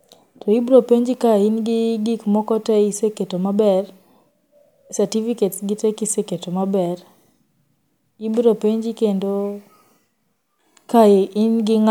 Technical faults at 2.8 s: none

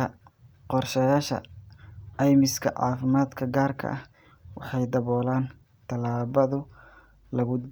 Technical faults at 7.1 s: mains hum

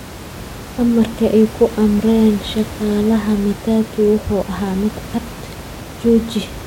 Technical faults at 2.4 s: none

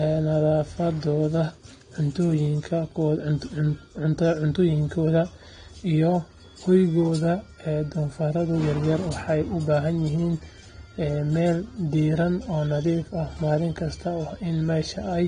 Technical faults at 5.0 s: AAC compression

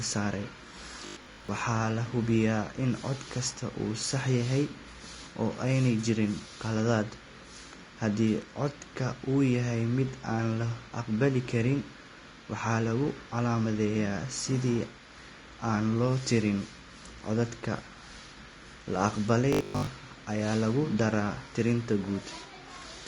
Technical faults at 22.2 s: Vorbis compression

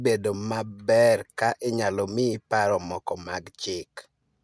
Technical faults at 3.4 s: none

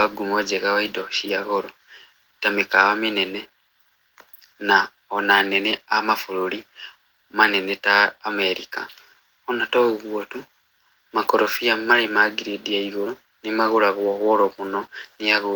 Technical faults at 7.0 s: none

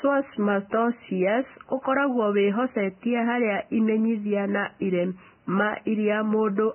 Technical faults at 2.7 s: Vorbis compression

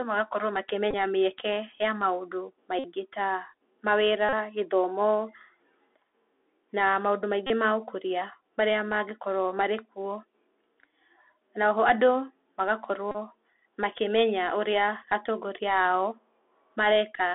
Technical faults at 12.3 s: Bluetooth CVSD headset codec

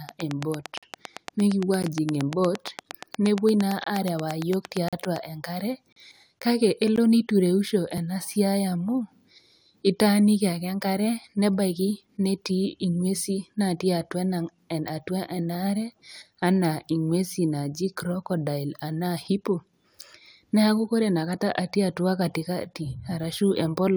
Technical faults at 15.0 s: none

